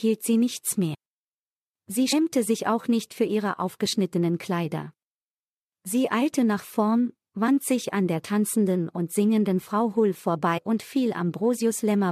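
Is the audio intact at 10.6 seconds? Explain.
No. From 10.57 to 10.59 s, compressed frames are skipped: the decoder drops whole frames, and the speech jumps ahead by about a tenth of a second, which fits four 23.2 ms frames. Unlike a dropout or click, there's no silence or sharp edge, just a brief smeared blip where the overlapping frames join.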